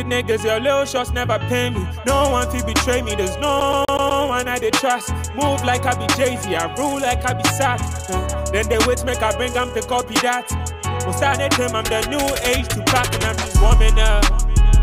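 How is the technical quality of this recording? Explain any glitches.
The recording has one clear glitch, a CD stuck on one turn, from 3.60 to 4.22 s. A scratch keeps bouncing the laser back a track, so a 124 ms slice repeats five times with a brief mute at each jump. The stutter is rigidly even and mechanical.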